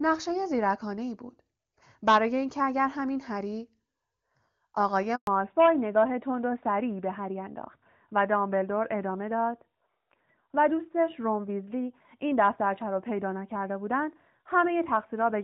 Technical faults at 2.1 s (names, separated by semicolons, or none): none